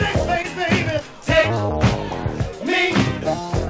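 Around 0.42 to 0.45 s there's a short concealed packet loss: about 20 ms of audio never arrived in time, so the receiver stretched the last bit of sound to cover the gap and crossfaded back, leaving a quick smear or wobble. The call path itself is band-limited, with nothing above 8 kHz, which fits a G.722 codec.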